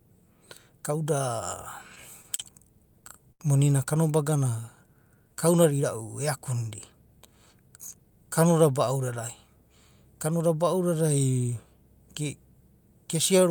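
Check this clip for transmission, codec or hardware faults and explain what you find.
Four jitter-buffer faults are audible in this speech clip: a single stall, a stuttering run, a slow-down and a speed-up. No speech is lost in the stalls; the damage there is to timing.

Short stall from a late packet, 2.36 to 2.41 s: a packet missed its playout slot and the jitter buffer emptied. The receiver sustained the last sound for 29 ms until the packet arrived, then resumed where it left off, pushing everything after it 29 ms later. It is heard as one sound held slightly too long, with a faint buzzy quality or a small dip in level.

Repeated stalls (stutter), 2.79 to 3.42 s: packets kept arriving late, so the buffer ran dry five times within this span. Each time the receiver extended the preceding sound until data returned, 111 ms in total, the longest single fill 74 ms, covering about 18% of the span. 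The result is a dragging, halting delivery, with the longer holds fading before normal playback resumes.

Jitter buffer slow-down, 4.30 to 5.36 s, ending just before "kaudada irau e": the buffer needed more reserve, so the receiver repeated individual pitch periods and fragments of pauses many times over, inserting 101 ms. Playback runs at about 91% of normal speed with the pitch unchanged. Sounds are drawn out and delivery feels sluggish.

Jitter buffer speed-up, 7.32 to 8.11 s: the buffer held more audio than its target, so the receiver trimmed short slices of one or a few pitch periods in succession, removing roughly a tenth of a second overall. Playback runs at about 112% of normal speed while pitch stays the same, so this stretch sounds noticeably hurried and compressed compared with the speech on either side.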